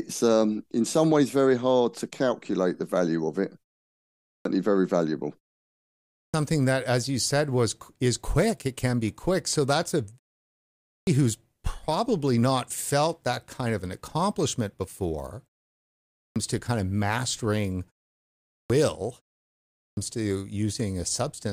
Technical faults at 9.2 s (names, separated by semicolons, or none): none